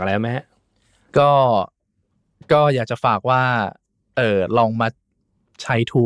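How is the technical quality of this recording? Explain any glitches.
Nothing glitchy turns up here; the speech recording runs along without any technical hiccups to point to.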